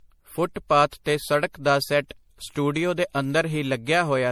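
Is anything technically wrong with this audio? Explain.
Yes. Throughout the speech there is generation loss: it sounds swirly, smeared and hollow, with consonant attacks blurred, likely from repeated re-encoding, consistent with roughly four passes through 64 kbit/s MP3. Each pass requantises on a shifted frame grid, compounding noise. A spectrogram shows flickering spectral holes and smeared onsets below about 20.2 kHz.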